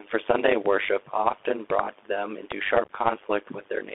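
Throughout the clip, the speech carries an overlap-add ripple. It was split into windowed frames and rebuilt with overlaps that do not sum to a steady gain. The level swings by about 60 dB at around 100 Hz. It sounds like a metallic buzz with extra tones around each note.

The whole clip also passes through the Bluetooth CVSD headset codec. Its one-bit, 64 kHz stream leaves only about 300 Hz to 3.5 kHz. The damage is plainly audible: a muffled, narrow tone, scratchy s sounds and a granular hiss under the speech.

Loud pops land at 0.66 to 0.68 s, at 1.70 to 1.81 s and at 2.52 to 2.54 s. The middle event has two pops and peaks about 20 dB above the speech. The others are single pops, about 15 dB above. The likely cause is a sudden voltage step, such as a plug, switch, static or driver glitch. The speech carries on underneath.

From 2.84 to 2.91 s there is unconcealed Bluetooth headset packet loss. 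About ten short voice packets were dropped and replaced with silence or an idle pattern. That is 37.5 ms missing across 52.5 ms, and the longest gap is 11.2 ms. The result is a brief, chopped stutter.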